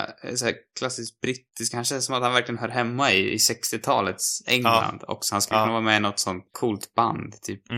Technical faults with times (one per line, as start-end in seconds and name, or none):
0.00-7.77 block size mismatch (truncated)